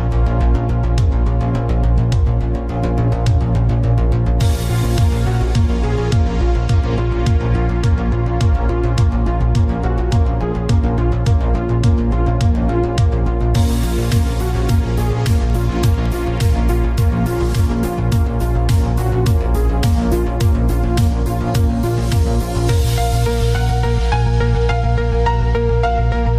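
From 15.38 to 16.39 s a train of clicks ticks over the sound: about ten near-identical pulses at a regular 9.1 per second, roughly as loud as the signal. That even spacing and uniform shape, unlike random crackle, point to a likely interference source.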